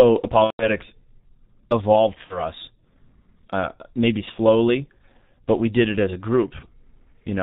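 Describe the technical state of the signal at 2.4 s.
At 2.4 s the sound is a fading smear near the end of a dropout that runs from 2.24 to 2.43 s. This is VoIP packet loss concealed by the speech codec. About 60 ms of audio went missing, which fits two 30 ms frames, and the decoder filled the gap by extending its last pitch and filter with falling gain. Because each frame builds on the one before, the sound stays weak and distorted after packets return.

Underneath, the audio is muffled and hoarse, with nothing above 4 kHz and smeared consonants. That is the G.723.1 codec, which points to its 6.3 kbit/s mode. Its slowly updated model of the sound, refreshed only every 30 ms, blurs rapid changes, and the damage here is heavy.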